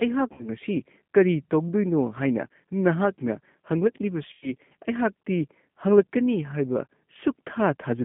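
Speech here, and the whole thing has that narrowband G.729 codec character. Nothing gets through below about 150 Hz or above roughly 3.5 kHz, and the voice comes across slightly rough and synthetic. That's because the decoder is rebuilding it from a vocal tract filter, a pitch predictor and a handful of pulses per frame, not carrying the actual waveform. The damage is plainly audible and consistent with a low-rate setting around 8 kbit/s. On top of that there's VoIP packet loss concealed by the speech codec in two places. The first is at 0.33 to 0.44 s, covering about 60 ms of missing audio, which fits two lost packets. The second is at 4.33 to 4.50 s, covering about 90 ms, which fits three. In both, the decoder keeps extending its last pitch and filter while turning the gain down, so the sound smears into a fading stretch. Because each frame builds on the previous one, the voice stays a bit weak or off for a short while after the audio comes back.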